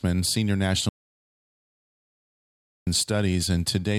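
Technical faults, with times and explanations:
0.89–2.87 s, audio dropout to silence: the speech stops abruptly mid-flow and the signal falls to silence, with no room tone or background hiss, for about 2 s before the speech cuts back in just as suddenly. Silence kept being written while nothing arrived from the input, most likely because of a lost connection, a failed link or an accidental mute. Whatever was spoken during those 2 seconds is gone.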